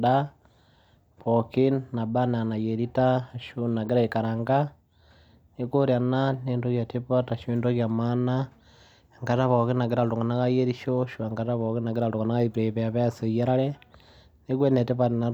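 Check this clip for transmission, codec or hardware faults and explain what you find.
Nothing turns up anywhere in this speech recording, so there's simply nothing to flag or explain.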